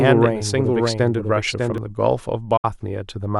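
From the very start to 1.78 s, the speech is heard twice. This is a doubled audio track. A second full-band copy trails the original by about 0.7 s, sitting roughly 5 dB lower. It carries no reverb tail or room colour, so it sounds like a clean echo of whole phrases. It was likely caused by a slower second capture path feeding the same mix. At 1.78 s the copy stops abruptly.

At 2.57 s a digital broadcast dropout cuts the audio. The receiver stopped getting usable frames and muted output until good data returned. The sound fades out in about 8 ms, stays silent, and resumes at 2.65 s. About 64 ms of programme is simply gone, which fits two lost frames. It is heard as a brief, clean hole rather than a crackle.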